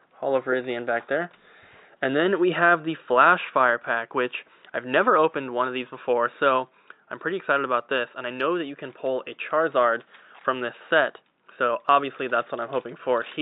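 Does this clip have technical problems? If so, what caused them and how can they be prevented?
No, no technical faults are audible anywhere in this recording, so nothing needs preventing.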